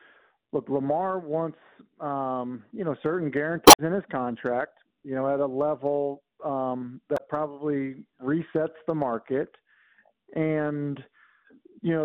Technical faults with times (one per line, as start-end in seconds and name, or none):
3.64-3.79 damaged data in a compressed stream
7.14-7.21 damaged data in a compressed stream